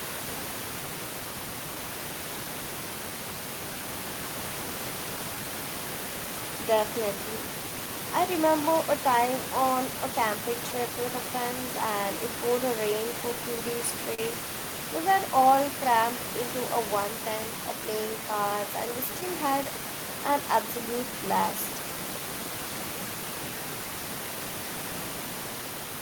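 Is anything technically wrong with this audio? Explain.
Yes. The speech has several timing faults.

Clock drift between sender and receiver runs throughout. The sender's clock runs about 2% slow, so the receiver's buffer keeps draining, and the drift shows as small timing hiccups recurring at uneven intervals rather than isolated dropouts.

Repeated timing corrections run from 0.46 s to 25.63 s. The receiver repeats short slices to keep up, playing at 98% speed and adding roughly half a second overall. This is heard, if at all, as slight hiccups in one direction, not random glitches.

A short stall from a late packet occurs at 14.14 to 14.20 s. The buffer ran empty, so the last sound was held for 40 ms and nothing was lost. Unlike a dropout, it is a single held sound with a slight buzz or dip.

Scattered short gaps fall between 18.86 and 19.66 s. Around three lost or late packets were patched by continuing the sound, each under about 10 ms. 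They are brief ticks or smears spread across the span, unlike the one held stall at 14.14 s.

The room noise sits about 10 dB below the speech and comes from the recording space.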